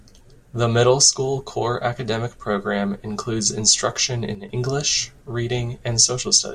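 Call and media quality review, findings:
Speech level dips abruptly by about 6 dB, 4.35–4.49 s; waveform envelope steps down, then back up. Likely one channel drops out before the mono sum.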